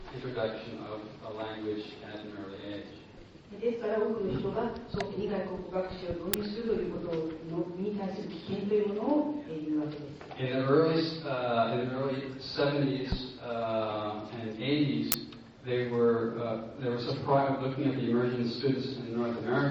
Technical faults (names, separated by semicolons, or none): uninitialised buffer